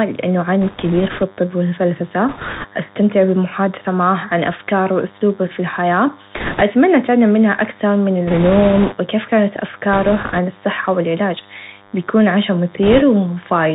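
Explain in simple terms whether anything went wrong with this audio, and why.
Three problems can be heard in this speech.

A DECT cordless phone buzz runs faintly the whole way through: a thin, steady 100 Hz buzz from a nearby cordless phone's radio bursts. It sounds harsher and more rasping than smooth mains hum.

The Bluetooth CVSD headset codec muffles everything, cutting all sound above 4 kHz. It turns s sounds scratchy and leaves a grainy hiss underneath, which ordinary phone-line muffling doesn't do.

Bit errors on a Bluetooth voice link add bursts of rushing crackle at 0.62 to 1.24 s, 2.29 to 2.65 s, 6.36 to 6.62 s, 8.27 to 8.95 s, 9.93 to 10.39 s and 12.83 to 13.03 s. These bursts are heaviest around 6.4 s and 8.3 s. They are a crackle rather than sharp clicks or gaps.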